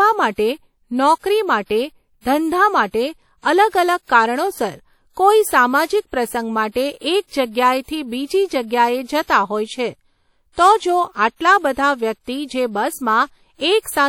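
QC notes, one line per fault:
Throughout: WMA compression. The speech carries plainly audible codec damage: a ringing, washy quality with hiss that rises and falls with the signal, likely from a WMA transform encode at a rate consistent with about 48 kbps. Quantisation noise is spread over each transform block, so it smears around syllables. On a spectrogram, energy stops sharply at 19 kHz with nothing above, and noise appears as a blurred haze clinging to speech onsets.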